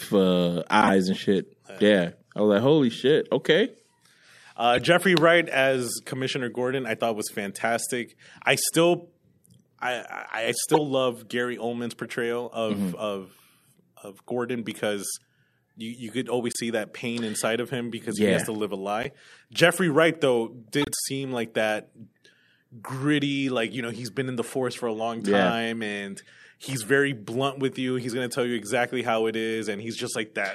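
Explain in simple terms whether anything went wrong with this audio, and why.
Yes. Short chirps and squeaky blips cut into the speech six times: at 0.82 s (just before "and shit"), 4.74, 10.70, 16.53, 19.03 and 20.82 s. The cause is a corrupt frame decoded: damaged compressed data was played anyway, putting sound at the wrong frequencies for a split second.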